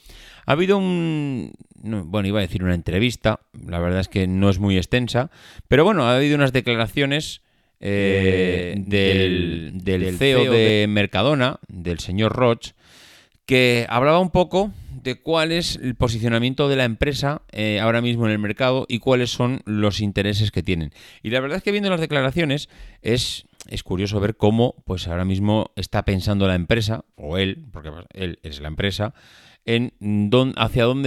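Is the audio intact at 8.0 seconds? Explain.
No. A doubled audio track runs from 7.96 to 10.70 s, right after "ha habido unas declaraciones". A second full-band copy of the speech trails about 150 ms behind, around 5 dB quieter, with no room colour. It switches in and out abruptly, likely from a slower duplicate capture path or an edit holding two offset copies.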